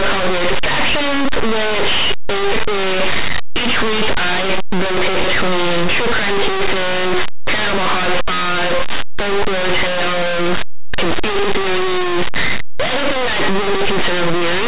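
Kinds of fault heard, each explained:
Linear audio read as companded: linear 8-bit samples are expanded as mu-law codes, pushing some values near zero to the largest outputs, so the speech is harshly distorted throughout.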